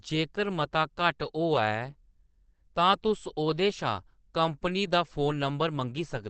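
Throughout, the speech sounds muffled and hoarse, with nothing above 8.4 kHz. That's likely Opus compression in its speech mode, at a rate that fits about 16 kbps.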